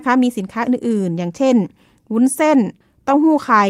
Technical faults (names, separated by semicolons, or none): none